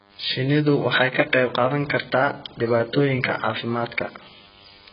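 The clip is speech with two faults running through its whole length. A DECT cordless phone buzz sits under it: a nearby handset or base transmits a radio burst every 10 ms, and the audio circuitry rectifies it into a thin, steady 100 Hz buzz roughly 35 dB below the speech. A spectrogram shows a stack of evenly spaced horizontal lines at 100 Hz and its multiples, and a zoomed waveform repeats every 10 ms. The speech also sounds dull and smeared, with heavy coding damage. A spectrogram shows a hard ceiling, with nothing above 5.1 kHz. This is likely AAC compression, pointing to AAC-LC at a very low bitrate around 12 kbps, where the encoder drops the upper band and coarsely quantises what remains.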